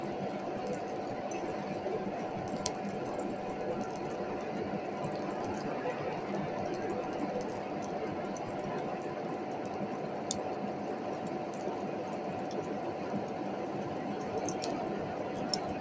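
The everyday sound shows no technical faults, and it carries the normal marks of a call's microphone processing: the lowest bass is trimmed away and nothing reaches above 8 kHz.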